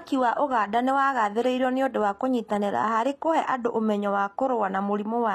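From start to finish the speech carries plainly audible HE-AAC compression damage, likely from a low-bitrate stream of around 24 kbps. The treble is still present, but it is synthetic: spectral band replication has copied lower bands upward under a coarse envelope, so the upper harmonics don't line up with those below the crossover. S sounds come out gritty and metallic. Plain low-bitrate MP3 or AAC would instead dull or cut the top end.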